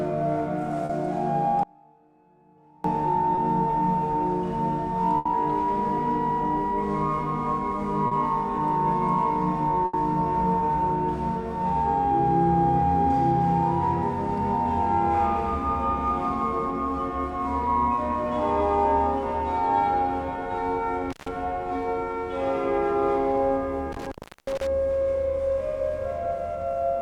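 At 0.85 to 0.91 s there is a short concealed packet loss. About 40 ms of audio never arrived in time, and the receiver covered the hole by extending the last sound, following its pitch where it was tonal and using shaped noise where it was not, before blending back into the real signal. It is heard as a brief smear or wobble rather than a gap, and a short transient inside it can disappear.

From 1.63 to 2.84 s the audio drops out to a faint residue for about 1.2 s. The wanted signal is lost, but the path after the break stays live, so the gap holds a faint trace about 30 dB below normal level instead of silence. This is likely a break upstream of a still-working chain. The cut and the return are abrupt, which separates it from a natural pause or a fade, and there is no synthesised filler as with packet loss.

Further short concealed losses occur at 3.35 to 3.39 s (20 ms), 8.07 to 8.13 s (40 ms) and 17.95 to 17.99 s (20 ms).

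At 5.17 to 5.27 s and again at 9.85 to 9.95 s there is a burst of packet loss, each with 80 ms missing and filled. The concealment holds the last sound and turns it down across the gap, so a tonal sound becomes a held buzz and other sounds a fading hiss. The audio then resumes further on with that stretch gone. The longer fill and the decay set these apart from the brief, blended smears.

At 21.11 to 21.29 s and 23.92 to 24.67 s there is intermittent contact, with the line open for about 140 ms and 360 ms. A loose connection breaks the signal with crackle at the edges and leaves hiss while it is open. The crackle and irregular break-up distinguish it from the residue of the dropout at 1.63 s.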